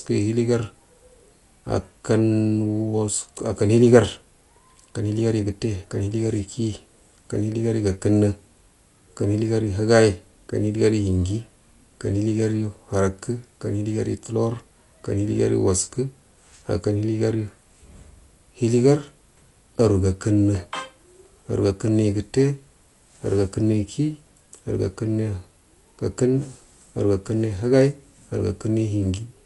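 Right through the speech, nothing above 11.5 kHz and a dull, rough flutter, likely Dolby Digital compression starving bands of bits, which fits around 64 kbps.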